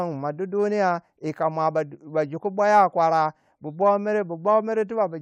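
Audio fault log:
No faults are audible anywhere in this speech recording.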